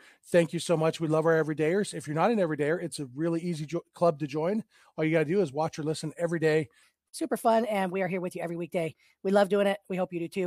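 A speech recording whose final section, from 6.83 s to 10.46 s, plays at the wrong speed: about 1.19 times too fast, so the pitch rises roughly three semitones and the pacing hurries together. That rules out a pitch shift alone. The likely cause is a wrong playback or editing clock.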